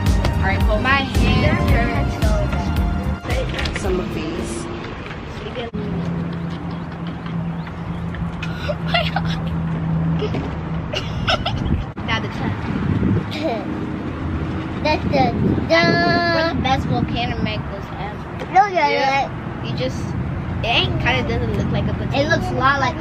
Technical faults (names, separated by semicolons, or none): none